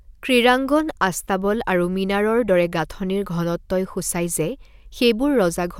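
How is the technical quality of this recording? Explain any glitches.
No technical glitches are audible anywhere in this recording.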